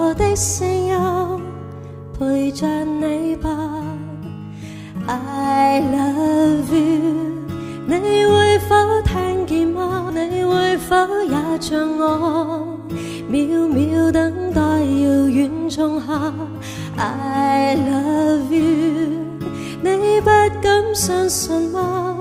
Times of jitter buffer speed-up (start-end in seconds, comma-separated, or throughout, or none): 10.19-11.60